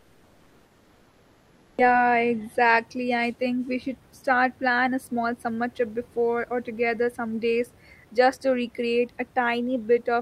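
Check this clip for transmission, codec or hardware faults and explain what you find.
One fault is audible: comfort noise in place of the background, from 0.00 to 1.77 s. The room noise is replaced by a steady, detail-free hiss about 3 dB quieter, likely synthesised by the receiver during discontinuous transmission. Unlike a gate or dropout, the pause never falls silent.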